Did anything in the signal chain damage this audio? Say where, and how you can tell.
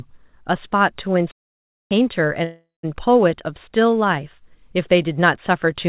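Yes. At playback there is a playback stall: speech drops to silence from 1.31 to 1.91 s, about 0.6 s, then resumes where it stopped, likely a starved or blocked player.

In call processing there is a call audio freeze from 2.44 to 2.85 s: the last sound smears into a fading buzz and then about 0.17 s of silence. Speech then continues with nothing lost, likely because delayed packets drained the jitter buffer.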